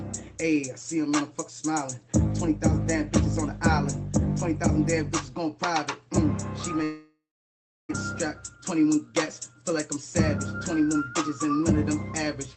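From 6.83 to 7.95 s the sound turns into a fading buzz, then about 0.66 s of silence, most likely a long network dropout. The receiver stretched the last audio, and roughly a second never returns. A spectrogram shows a decaying smear, then a blank gap below the codec's 8 kHz ceiling.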